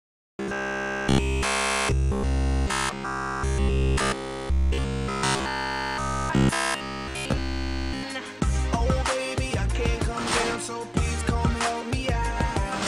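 From 0.02 to 8.03 s it's robotic sound from repeated short buffers: a rigid 66.7 Hz buzz, likely from roughly 15 ms chunks being replayed throughout instead of fresh audio.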